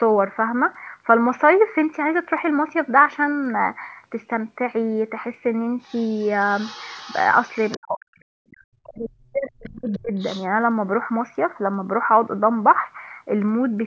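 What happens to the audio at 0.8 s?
At 0.8 s the speech is intact, with no fault at that moment, only the normal band limit of call microphone processing, which leaves nothing above 8 kHz.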